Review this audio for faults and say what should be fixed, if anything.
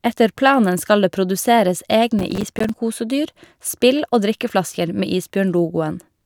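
Processor overload crackle tears through the speech from 2.19 to 2.69 s. Buffer deadlines keep being missed, leaving dozens of tiny hard-edged silent gaps, which fits buffers of roughly 5 ms. Prevent it by raising the buffer size or reducing processing load.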